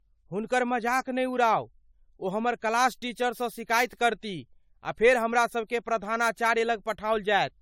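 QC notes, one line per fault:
Throughout, generation loss: the speech sounds swirly and hollow, with smeared, softened consonant attacks, far worse than a single AAC-LC pass near 96 kbit/s should be. Likely it's been re-encoded around seven times, each pass quantising on a shifted frame grid and stacking noise and spectral holes.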